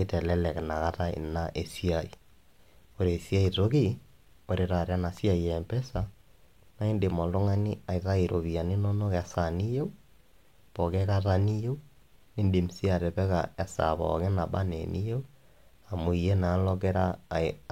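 No technical faults can be heard anywhere in the recording, and the speech signal stays steady and intact from its opening to its close.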